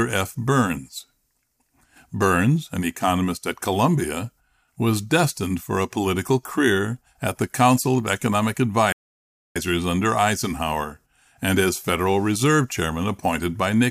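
At 8.92 s the player likely ran short of data or was blocked, a playback stall: the speech cuts out mid-flow for about 0.63 s, resuming at 9.56 s.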